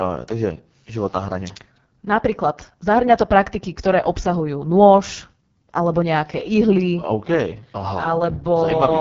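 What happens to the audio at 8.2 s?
At 8.2 s the speech carries the AMR wideband (HD Voice) codec damage present through the whole clip. The sound is rough and raspy, which fits the lowest rate of about 6.6 kbit/s. Unlike narrowband AMR, the bandwidth reaches roughly 7 kHz, with the top band filled by shaped noise.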